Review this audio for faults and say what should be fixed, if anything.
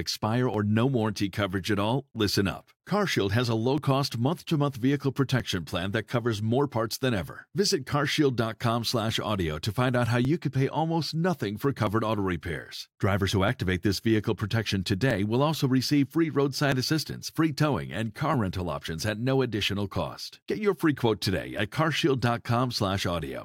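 Two devices are likely running on separate clocks that disagree by roughly 0.1 percent, so the buffer between them drifts until a small block of samples, around 70, is dropped or repeated. These clock drift buffer slips are heard as a regular click every 1.62 s, about fifteen in all, from 0.54 to 23.2 s. To prevent this, lock both devices to a single shared clock or insert asynchronous sample-rate conversion between them.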